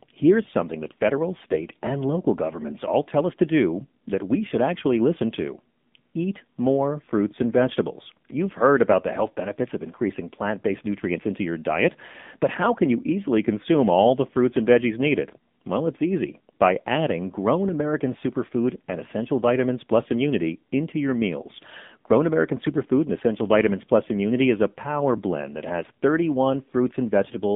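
A speech recording that has passed through the AMR narrowband mobile codec for its whole length. Everything sits in a telephone band of roughly 150 Hz to 3.6 kHz, with nothing above 4 kHz, because the codec works at 8 kHz sampling. The voice is rebuilt from a vocal-tract model driven by sparse pulses, and here it has a plainly audible buzzy, synthetic edge. That fits one of the lower modes, around 7.4 kbps. From 1.52 to 1.70 s there are AMR bit errors, between "here's something that federal" and "and local governments all". For those 0.19 s the voice keeps roughly its pitch and level but turns hoarse, scratchy and gargly. That span matches about nine consecutive 20 ms frames in which some of the less protected bits arrived flipped, at a rate on the order of a couple of percent. The excitation pulses were placed wrongly and the fine gain and spectral values were corrupted, while the frames still passed the check on their critical bits and were decoded anyway.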